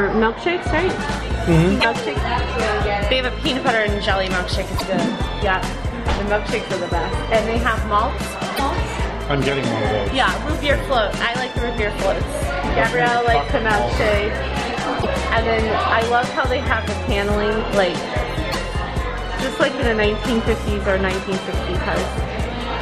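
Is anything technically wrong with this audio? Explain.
Yes. Damaged data in a compressed stream: corrupted bytes make the decoder misread frames and hunt for the next header, so brief chirps or blips of roughly 70 to 84 ms occur at 1.77, 4.74, 8.53, 14.98 and 18.48 s.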